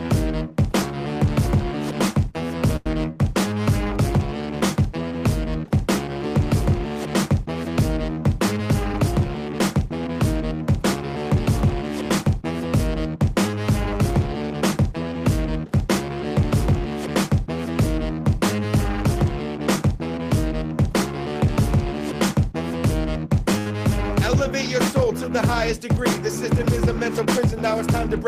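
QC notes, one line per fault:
2.76–2.87 s and 23.59–23.67 s, short stall from a late packet: a packet showed up late both times, the jitter buffer ran dry, and the receiver held the last bit of sound until it came, for 92 ms and then 67 ms. Nothing is lost, since it resumes right where it left off, but you get a brief held stretch with a slight buzz or dip, and the overall delay grows by that same amount each time.
8.51–9.94 s and 26.49–27.87 s, jitter buffer speed-up: after the buffer filled past its target, the receiver trimmed tiny pitch-period chunks over and over to catch up, running the audio at 106% and then 104%. The pitch stays put but the first run feels hurried. The first run drops roughly a tenth of a second, the second a bit less.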